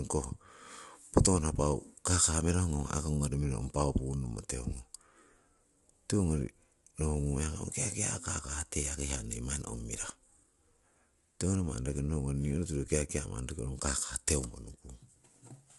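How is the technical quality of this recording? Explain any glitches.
The technical quality is limited by one fault that runs through the whole clip. Low-delay AAC compression degrades the speech from start to finish: the voice sounds rough and grainy, with audible hiss between harmonics. This is likely AAC-ELD at a low bitrate, around 32 kbps. Its short frames resolve pitch poorly. On a spectrogram, harmonics look smeared and noisy, and all energy stops sharply at 11.6 kHz.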